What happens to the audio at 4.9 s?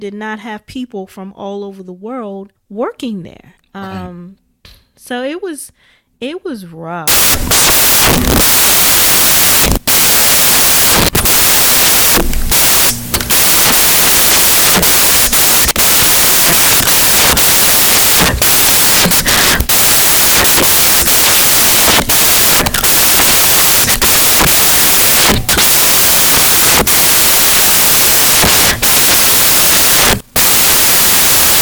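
Nothing goes wrong at 4.9 s; the speech plays through that moment intact, with no dropout, click or distortion.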